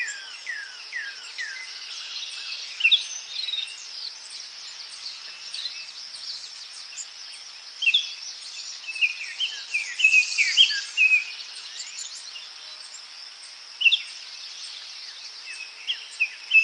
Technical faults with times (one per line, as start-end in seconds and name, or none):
none